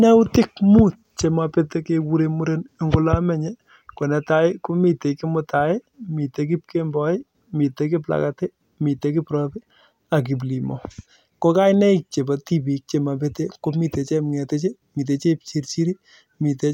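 No technical faults occur at any point in this speech recording, so there is nothing to place in time order.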